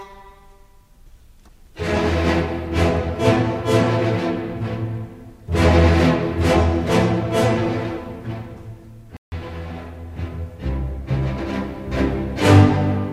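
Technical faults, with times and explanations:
9.17–9.32 s, Bluetooth stall: radio interference likely held back the wireless packets long enough for the headphones' small playback buffer to empty before resent data arrived, so the receiver had nothing left to play. The result is an abrupt drop to dead silence lasting about 154 ms, with no fade at either edge, after which the audio resumes once the delayed packets get through and the buffer refills.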